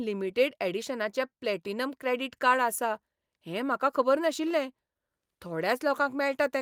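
No technical faults can be heard in this recording.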